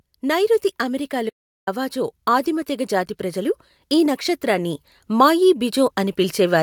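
A speech clip with two technical faults. The first is an audio dropout to silence. Right after "నైఋతి అమెరికా", the sound cuts out at 1.30 s and returns at 1.67 s. The gap lasts about 0.38 s. It is dead silence, with no room tone underneath. Whatever was spoken in that span is lost. The likely cause is the input being interrupted, through a disconnected device, a broken link or a brief mute, while the recorder kept writing silence. The second fault is automatic gain rising. From 1.93 s to 6.58 s the level climbs steadily, by about 7 dB in total. The voice and the background swell together, so the ambience grows along with the speech. This is a gain control reacting to an input it judged too quiet. It kept raising its gain over several seconds instead of holding a fixed level.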